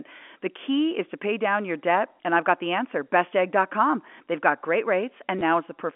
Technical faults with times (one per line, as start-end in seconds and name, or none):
5.39-5.41 packet loss with last packet repeated